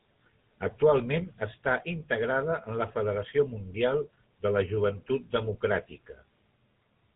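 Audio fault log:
Throughout, GSM full-rate codec: the speech carries a plainly audible buzzy, gravelly roughness and nothing above 3.9 kHz, which fits a 13 kbps full-rate stream. The codec rebuilds the vocal tract and drives it with sparse, regularly spaced pulses, coarsening fine detail.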